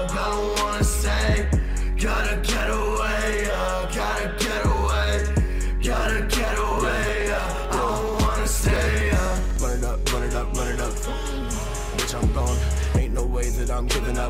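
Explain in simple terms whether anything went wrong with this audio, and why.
From about 6.59 to 9.63 seconds there is a steady rattle of ticks, one every 0.062 seconds. These are periodic USB or driver dropouts: something kept stalling the audio connection, and each time a couple of milliseconds of sound was skipped, about fifty times in all.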